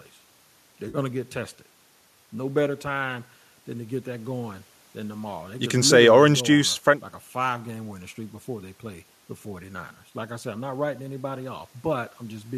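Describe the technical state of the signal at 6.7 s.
At 6.73 to 6.76 s the speech shows AAC frame loss with concealment. About 20 ms of coded audio, consistent with two lost frames of what is likely a low-delay AAC stream, never reached the decoder, which filled the gap by reusing the last good spectrum with scrambled phase. It sounds like a brief smeared, noisy blip. On a spectrogram, the harmonics blur into a short, even, noise-like smear. On the waveform, the periodic cycles lose their regular shape for that instant.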